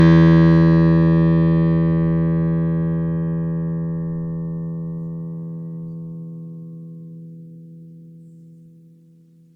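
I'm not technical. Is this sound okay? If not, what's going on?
No. The music sounds swirly, hollow and smeared throughout, with blurred attacks. That's generation loss, likely from being re-saved as MP3 about four times over.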